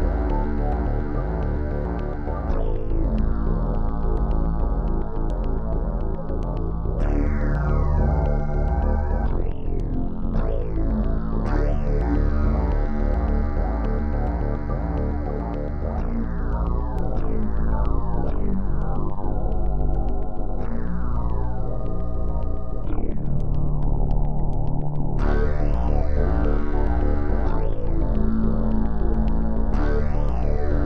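At 16.99 s a DC step occurs: the waveform's zero line suddenly shifts by about -24 dBFS and stays offset through to the end of the clip rather than stepping back or decaying. The abrupt jump is heard as a single low thump, while the sound itself carries on unchanged. Unlike a dropout click, nothing is lost or interrupted. Only the baseline moves, and a held offset like this is inaudible after the initial thump.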